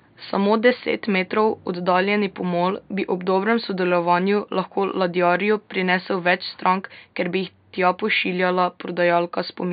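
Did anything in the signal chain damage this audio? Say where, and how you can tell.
No, nothing along the chain from microphone to playback has damaged this speech recording. The only thing under the speech is the room's own background noise, sitting about 51 dB below the speaker, which belongs to the recording space rather than the equipment.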